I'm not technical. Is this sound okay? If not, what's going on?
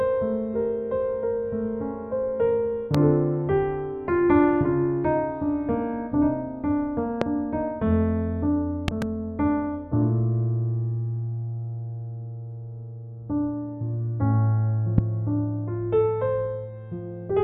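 No, there's a problem: a loud pop, a sharp click or thump sitting well above the everyday sounds, which keep going underneath. Single pops land at about 2.95, 7.22 and 14.98 seconds. Around 8.88 to 9.04 seconds there's a quick double pop. Each is a sudden electrical jolt added to the sound, likely from a plug, a switch, static or a glitch in the playback hardware.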